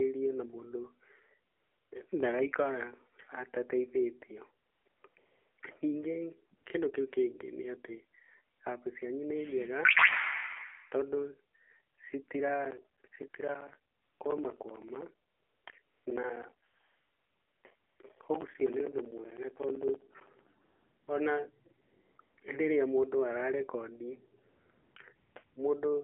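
The whole recording passes through the AMR narrowband mobile codec at 7.4 kbps. Only about 300 Hz to 3.4 kHz survives. A low-bit vocal-tract model rebuilds the speech, so it sounds buzzy and synthetic. The damage is plainly audible.

From 1.52 s to 25.56 s, AMR comfort noise fills the pauses many times. Each time the phone judged the talker silent and stopped sending speech frames. The gaps run from 20 ms to nearly a second, the longest at 16.68 to 17.64 s. Steady synthetic hiss then switches in and out.

Between 12.65 s and 20.47 s there are periodic USB or driver dropouts. Every 64 ms, roughly 10 ms of audio goes to silence, some 150 times in all. A blocked bus or driver is the likely cause. It is heard as a regular ticking that sounds only while speech is present.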